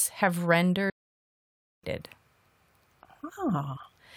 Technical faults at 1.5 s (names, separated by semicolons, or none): playback stall